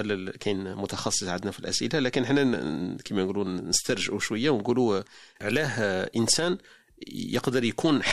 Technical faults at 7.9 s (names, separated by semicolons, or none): none